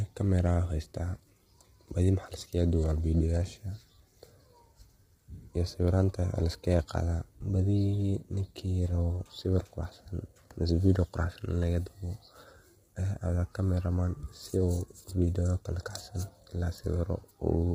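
Low-delay AAC compression runs throughout the speech, likely from AAC-ELD at a low rate near 24 kbps. Its short frames blur pitch harmonics, so the voice sounds rough and grainy, with noise between harmonics, and nothing remains above 15.6 kHz.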